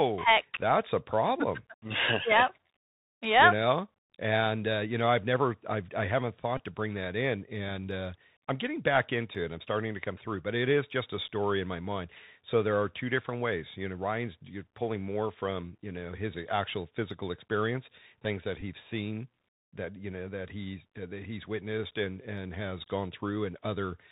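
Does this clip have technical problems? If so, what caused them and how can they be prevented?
Yes. The whole clip passes through the Bluetooth CVSD headset codec, and the damage is plainly audible. CVSD sends one bit per sample at 64 kHz, which fits a 64 kbps link. Each bit only says up or down, and the step size adapts. Nothing above 4 kHz survives. Loud high sounds outrun the step and distort. S sounds turn scratchy. A granular hiss sits under the speech. To prevent this, use a headset and phone that negotiate a wideband codec such as mSBC or LC3, or record through a wired microphone.

There are also two Bluetooth headset packet repeats. The first is at 6.57 to 6.59 s, between "never i've i haven't" and "to bring that in". About 19 ms went missing there, which points to roughly five lost packets. The second is at 18.61 s, between "physical experience things that" and "seen that you know". 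About 11 ms went missing there, which suggests three packets. In both places the chip replayed the last good packet's bits. A repeat every 3.75 ms gives a short buzz near 267 Hz until good packets return. To prevent this, keep the phone close to the headset and away from other 2.4 GHz traffic.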